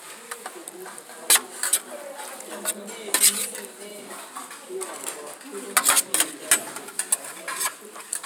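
Listening to this recording of sounds, nothing technical stood out as a problem.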